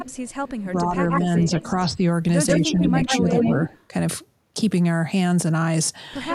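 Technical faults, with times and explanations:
0.00–0.65, 1.09–1.85, 2.48–3.83 and 6.29–6.35 s, echo leak: a delayed copy of the speech trails behind it, 181 ms late at first, then 143 ms, from about 20 dB down to roughly as loud as the speech itself. It's likely a loudspeaker echo the far end's canceller failed to remove.
0.62–2.02 and 2.59–3.73 s, speech suppressed in double talk: the speech dips by up to about 10 dB in patches, adding up to roughly a second and then most of a second, while the echo runs over it. The likely cause is the canceller ducking both signals because it couldn't separate them.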